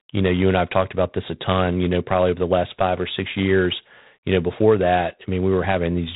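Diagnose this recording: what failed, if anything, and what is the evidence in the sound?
The codec stage failed: the speech has been through G.726 ADPCM at a low rate throughout. A harsh, rasping hiss rides on every syllable and swells and fades with the speech level, which points to 24 kbit/s, three bits per sample of prediction error. On a spectrogram, energy stops flat at 3.9 kHz, and granular noise fills the band beneath the voiced harmonics, thickening wherever the speech is loud.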